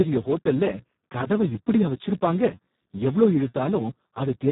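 Throughout the speech, a Speex codec running at a very low setting, one that fits a bitrate of about 4 kbps, leaves too few bits for the excitation. The speech comes out hoarse, noisy and close to robotic, with nothing above 3.8 kHz.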